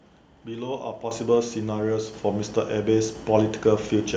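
At 1.11 s the microphone volume is stepped up: software judged the input too quiet and raised the device's gain by about 8 dB at once. Unlike a talker leaning closer or a gradual gain ramp, the jump is instant and background noise rises with the speech.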